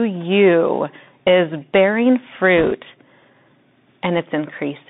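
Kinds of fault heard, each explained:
Bluetooth CVSD headset codec: The speech runs through the narrowband Bluetooth headset codec for its whole length, which points to a 64 kbps CVSD link. It is coded as one up-or-down bit per sample with an adapting step, and the passband sits between about 150 Hz and 3.7 kHz. The damage is plainly audible: s sounds come out scratchy, louder bright passages smear where the step cannot keep up, and a fine granular hiss sits under the speech.
Bit errors on a Bluetooth voice link: From 2.57 to 2.73 s, flipped bits on the headset link add a burst of rushing, crackly noise to the speech, with an error rate of around two percent. Each CVSD bit moves the waveform by only one small step, and the adaptive decoder soon settles after a wrong bit. The errors therefore do not produce sharp clicks. They give a short stretch of gritty noise spread across the affected speech, about 0.15 s long, which then clears.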